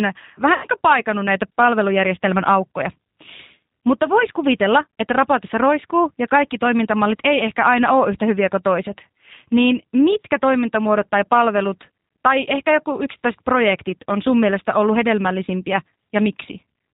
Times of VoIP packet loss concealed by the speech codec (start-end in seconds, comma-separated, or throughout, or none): 0.54-0.66